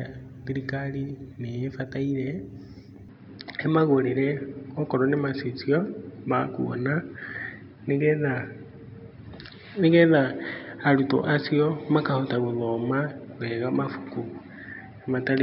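At 3.09 s the speech abruptly narrows and stays that way to the end: nothing above 5.3 kHz remains, so the sound turns dull and boxy, the level shifts by around 5 dB, and a new noise floor appears roughly 50 dB below the speech. The change is instantaneous, with no gap at the transition. This points to the input being switched to a poorer device, likely another microphone or a headset's call profile.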